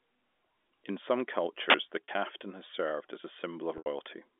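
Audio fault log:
1.70–1.74 s, uninitialised buffer: a sharp, loud 40 ms burst of digital noise. A block seems to have gone out before any audio was written into it, so whatever junk sat in memory got played as samples.
2.05–2.08 s and 3.78–3.86 s, packet loss with pitch repetition: the first gap, just before "has served as a", lasts 40 ms, which fits two lost packets, and comes across as a briefly held, buzzy tone. The second, right after "has served as a", runs 80 ms, which points to four packets, so the repeated pitch period fades out to near silence before the audio cross-fades back in. The repetition from the receiver's concealment is what makes that buzz. Both gaps sit on the narrow telephone band, which runs from about 250 Hz to 3.5 kHz.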